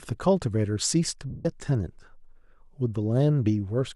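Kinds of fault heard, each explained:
Lost LE Audio frames: for 150 ms from 1.30 s the speech is replaced by the decoder repeating its last spectrum with random signs, a noisy smear that fades, fitting about fifteen 10 ms frames. Unlike a plain dropout, it never cuts straight to silence.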